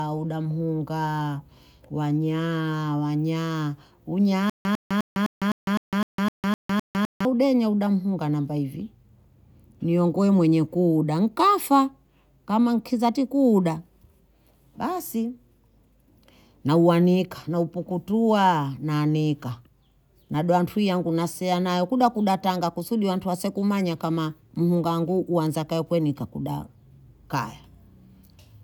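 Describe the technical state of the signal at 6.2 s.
At 6.2 s the speech is in the middle of a stutter with silent gaps running from 4.50 to 7.25 s. The stream most likely stalled, and on each retry it replayed its last fragment before running dry. The result is a 101 ms burst of the same speech repeating ten times, separated by about 154 ms of digital silence, giving an even 255 ms cycle. The speech that belonged in that span is lost, and normal playback resumes at "hudenya uda mhunga na".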